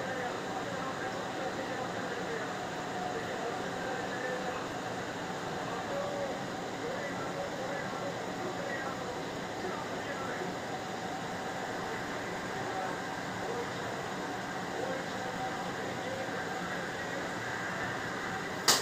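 A filter restarted on every block runs through the whole clip. The filter drops its stored state at each block boundary. Each block therefore starts from silence. That gap produces a small transient at the start of every block. The transients repeat 25 times a second, which points to blocks about 40 ms long. Together they form a steady low buzz under the sound. The buzz rises and falls with the signal's level.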